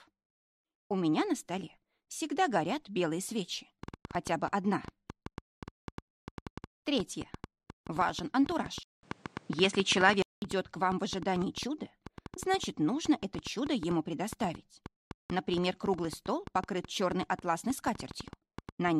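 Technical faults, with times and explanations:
3.83 to 18.89 s, train of clicks: About 7.1 sharp ticks per second arrive at an uneven pace, roughly a hundred in all, peaking around 5 dB above the sound and audible in pauses too. The likely cause is interference from nearby equipment or a faulty connection or power supply injecting repeated pulses.
8.83 to 10.42 s, input switched to a poorer device: A silence of about 0.2 s marks the change. The sound then turns duller, with nothing above 10.5 kHz, a level shift of around 5 dB, and new background noise roughly 40 dB down, likely from a narrower-band microphone or headset taking over.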